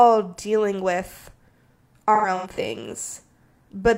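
From 2.14 to 2.58 s the speech shows AAC frame loss with concealment. Roughly 0.21 s of audio, which fits about five lost frames, is missing in separate gaps spread across that 0.43 s stretch, the longest around a tenth of a second. The decoder covers each gap by reusing the previous good spectrum, so those moments sound smeared, noisy or phasey. On a spectrogram, the harmonic detail blurs into stretched, grainy blocks; the waveform loses its crisp envelope there.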